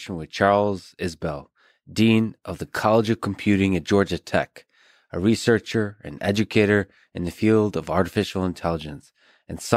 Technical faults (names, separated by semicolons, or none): none